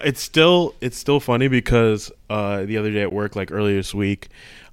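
At 3.10 s a 15 ms block of digital silence replaces the speech, likely a missed buffer fill; the sound cuts out and back abruptly, with no fade.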